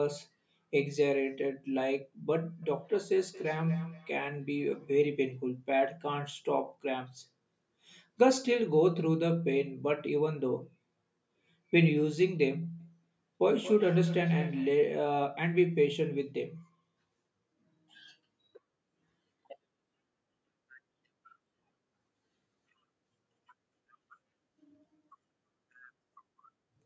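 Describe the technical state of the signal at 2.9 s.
At 2.9 s the speech is caught in a feedback echo between two devices, running from 2.63 to 4.23 s. Two devices on the same call sit in one room. One plays back what the other's microphone sent, and that microphone picks it up again. Each echo canceller removes only its own playback, so the loop survives. Every sound returns about every fifth of a second, thinner and more ringing each pass. The echoes peak at about 20 dB below the speech.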